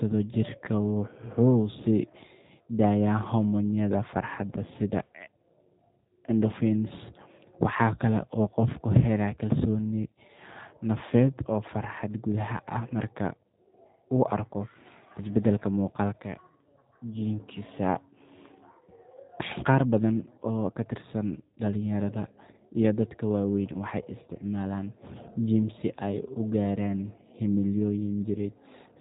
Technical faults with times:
0.00-29.00 G.729 codec

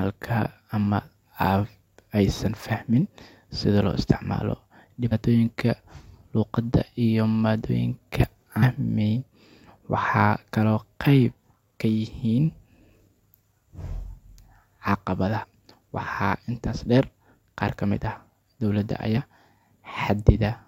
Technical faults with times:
5.11 damaged data in a compressed stream
8.62 damaged data in a compressed stream
15.42-15.44 damaged data in a compressed stream
19.16 damaged data in a compressed stream

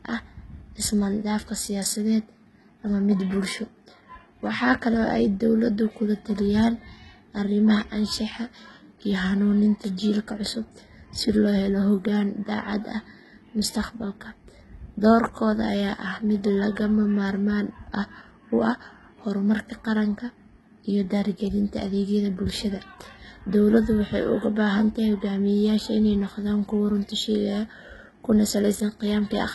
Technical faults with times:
0.00-29.54 HE-AAC compression

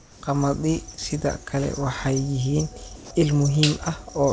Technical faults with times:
0.00-0.23 comfort noise in place of the background
2.96-3.11 comfort noise in place of the background

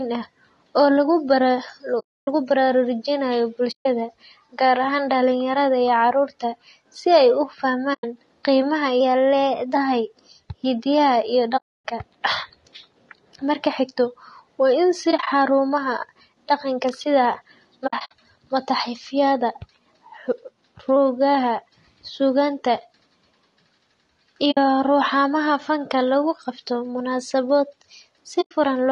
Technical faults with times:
0.00-28.92 low-delay AAC compression
1.99-2.28 AAC frame loss with muting
3.71-3.86 AAC frame loss with muting
7.93-8.04 AAC frame loss with muting
9.01-9.75 drift correction step
11.57-11.86 AAC frame loss with muting
15.11-15.28 AAC frame loss with muting
17.87-18.12 AAC frame loss with muting
20.28-20.96 drift correction step
24.51-24.58 AAC frame loss with muting
28.41-28.52 AAC frame loss with muting

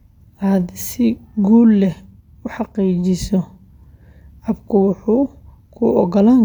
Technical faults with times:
none

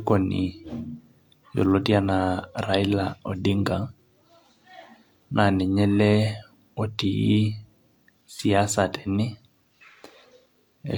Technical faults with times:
4.83-4.87 overlap between stream segments

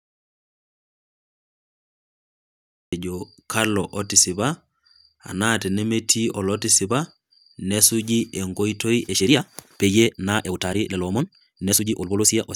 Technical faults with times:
0.00-2.92 audio dropout to silence
9.02-12.56 time-stretched section

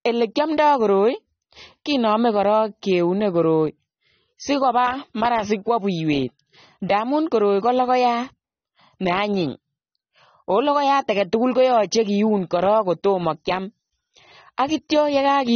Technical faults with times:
0.00-15.55 AAC compression

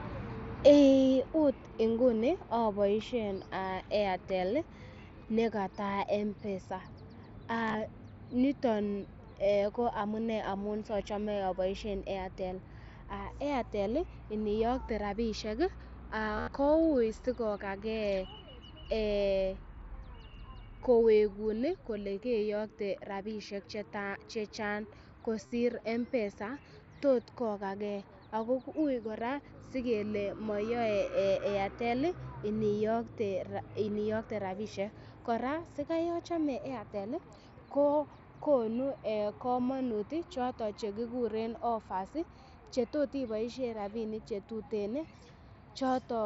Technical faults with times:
7.67-7.75 concealed Bluetooth headset packet loss
16.37-16.48 concealed Bluetooth headset packet loss
25.46-25.52 concealed Bluetooth headset packet loss

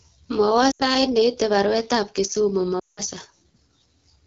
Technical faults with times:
0.00-4.27 AMR wideband (HD Voice) codec
0.71-0.83 lost AMR speech frames
2.79-3.01 lost AMR speech frames

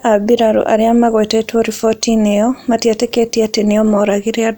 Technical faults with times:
none

